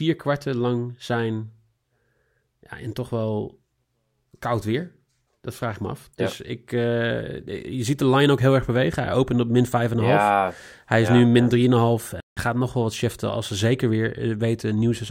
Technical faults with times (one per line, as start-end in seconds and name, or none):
12.20-12.37 playback stall